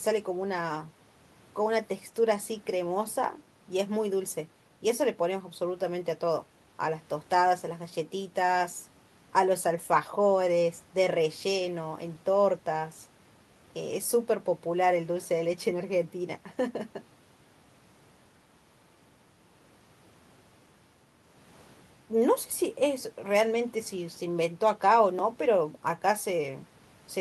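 No technical faults can be heard anywhere in the recording; the speech signal stays steady and intact throughout.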